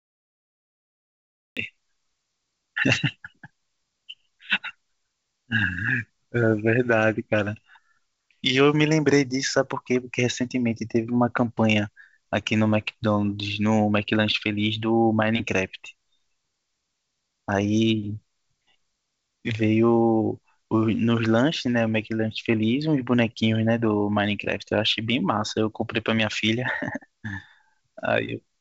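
From the opening until 1.57 s there is only digital silence, and then the speech appears abruptly, already in the middle of a sound. This is a cut-off start: capture began late, so the first sound is missing its natural attack. A soft fade-in or a quiet lead-in would ramp up gradually. Here the level jumps from nothing to full at once. The call path's band limit, with nothing above 8 kHz, applies to everything after the cut.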